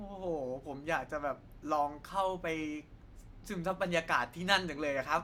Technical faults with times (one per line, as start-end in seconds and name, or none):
none